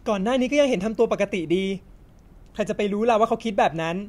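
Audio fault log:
No audible faults detected.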